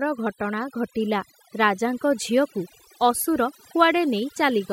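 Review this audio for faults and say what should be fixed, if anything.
Overdone noise removal runs through the whole clip. The background drops and breaks up into twinkling specks. This happens because the noise reducer was pushed too hard. Any frequency band close to its noise estimate gets pulled far down or shut off. Quiet parts of the speech fall near that estimate, so they are stripped away along with the noise. To prevent it, use a gentler reduction setting and check by ear before committing.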